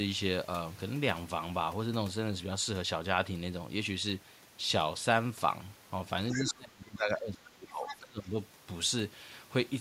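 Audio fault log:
6.30–6.53 s and 7.88–7.96 s, other side's voice leaking through: brief scraps of a second voice sit roughly 10 dB under the talker. The likely cause is loudspeaker playback reaching the microphone and surviving the echo canceller, so only fragments slip past.
6.35–8.39 s, speech suppressed in double talk: over roughly two seconds the talker's level sags and breaks up, bottoming out around 25 dB down. Both ends were talking at once, and the echo canceller likely could not tell near speech from echo, so it attenuated both.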